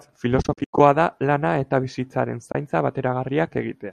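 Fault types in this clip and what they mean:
AAC frame loss with muting: the speech drops into soft-edged silences. There is a broken cluster of gaps from 0.42 to 0.80 s, with about 250 ms missing across 380 ms and the longest hole around a tenth of a second, then a brief 30 ms dropout from 2.52 to 2.55 s. The decoder zeroed the lost frames' spectrum, and overlapping windows fade each gap out and back in, consistent with the short frames of the low-delay AAC likely in use.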